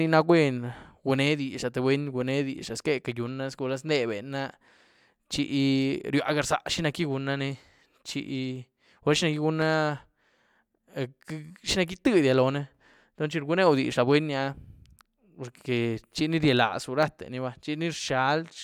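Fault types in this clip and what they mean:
Clock drift buffer slips: clicks at a steady 1.06 s interval throughout the speech, likely from mismatched device clocks; random dropouts lack that regular spacing.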